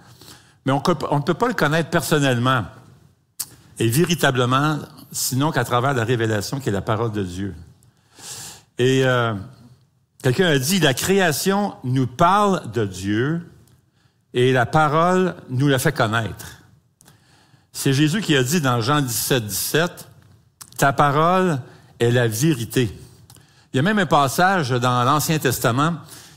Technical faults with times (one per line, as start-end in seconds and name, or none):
9.02-9.04 electrical switching spike